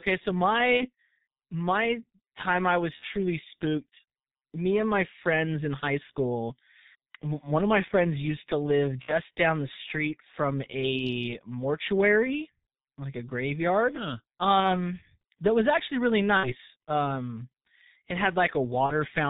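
Heavy G.723.1 codec damage runs through the whole speech clip. Nothing reaches above 4 kHz. The sound is muffled and hoarse. Consonants blur together. This coarseness fits the codec's 6.3 kbit/s mode and its slow 30 ms frame updates.

VoIP packet loss concealed by the speech codec strikes at 0.77–0.89 s, 2.96–3.07 s, 9.02–9.13 s, 14.60–14.76 s, 16.37–16.55 s and 18.86–18.92 s. Each gap fits one or two lost 30 ms frames. The decoder repeats its last pitch and filter at falling gain. The sound turns into a buzzy tone or coloured noise and fades. It stays weak briefly afterwards.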